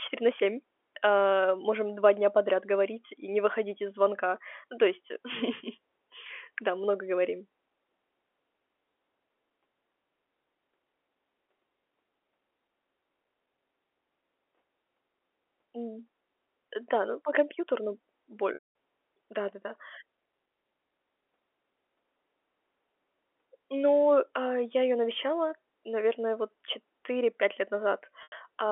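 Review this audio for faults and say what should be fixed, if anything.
At 18.54 to 18.69 s and again at 28.23 to 28.32 s, the narrow telephone-band speech briefly hangs on a held, buzzy tone that fades before it returns. This is packet loss with pitch repetition. About 210 ms and 90 ms of audio went missing, which fits runs of 30 ms packets, and the receiver filled each gap by repeating the last pitch period and fading it out. A larger jitter buffer or forward error correction on the network path would prevent these dropouts.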